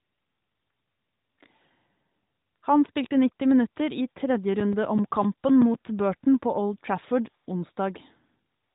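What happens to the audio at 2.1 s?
Nothing goes wrong at 2.1 s; the speech carries on intact through that moment, with the narrowband AMR mobile codec's usual ceiling near 3.8 kHz and nothing added to it.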